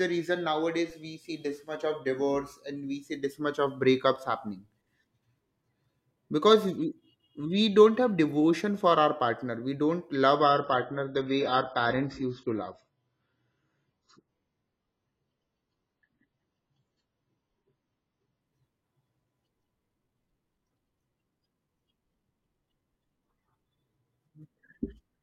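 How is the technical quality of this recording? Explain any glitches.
The recording has two faults: a DC step near the start and an eight-second stretch where an adaptive stream drops to a lower bitrate.

At 0.90 s, just before "we see this much", the waveform's zero line suddenly jumps, as happens when a converter recalibrates or an offset input is switched in. That DC step is heard as a single low thump. The offset then drains away as a 20 Hz high-pass pulls the baseline back toward zero, while the speech carries on untouched.

From 10.41 s to 18.41 s, right after "partner we don't love", the stream switches to a much lower-bitrate version of the same AAC encoding. The drop from the earlier quality fits a fall from roughly 96 to 16 kbit/s. Nothing above 7.6 kHz survives, so the voice turns dull, with more coding artefacts. The change is abrupt in both directions and leaves no gap.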